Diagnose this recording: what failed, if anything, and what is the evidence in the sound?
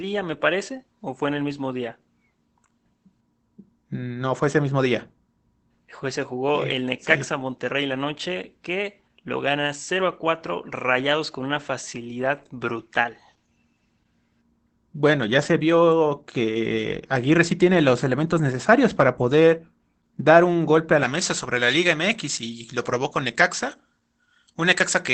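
Codec stage: Opus voice compression is audible throughout. The band stops near 8 kHz, and the speech sounds muffled, hoarse and faintly robotic. The linear-prediction coder is quantising the excitation coarsely, which points to Opus in SILK mode at roughly 12 kbps with wideband bandwidth.

Call-processing stage: from 21.03 s to the end, the pre-emphasis is left on. The treble jumps to about 11 dB above 1 kHz at 10 kHz, making the speech thin, bright and sibilant. A treble boost, which fits a J.17 curve, was applied without the matching de-emphasis cut.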